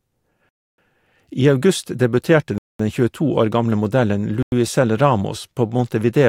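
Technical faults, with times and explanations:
0.49–0.78 s, 2.58–2.80 s and 4.43–4.52 s: Bluetooth stalls. The speech drops abruptly to silence three times, for about 0.29 s, 0.22 s and 0.10 s, then resumes just as suddenly. The likely cause is wireless interference delaying packets so the headphone buffer empties and playback halts until retransmitted data arrives. On the waveform each gap is a flat line with hard edges; on the spectrogram it is a blank vertical band across all frequencies.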